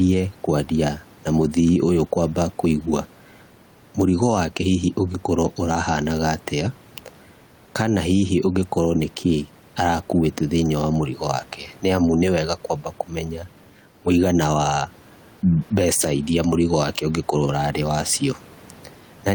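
Throughout the speech, gain pumping: the background room noise, about 32 dB below the voice, swells in pauses and ducks under loud syllables by roughly 5 dB, likely from overdriven microphone gain caught by a fast limiter. The waveform looks flattened, and the noise floor on a spectrogram rises and falls with the speech.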